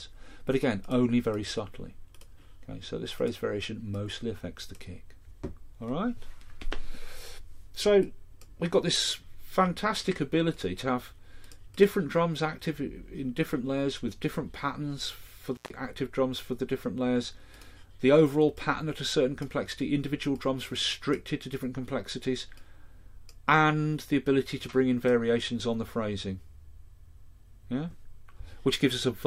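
At about 15.55 s there's an intermittent contact: a loose plug or cable lets go for roughly 130 ms, until 15.71 s. The sound drops out with a crackle where it breaks and again where it reconnects, with faint hiss in the gap.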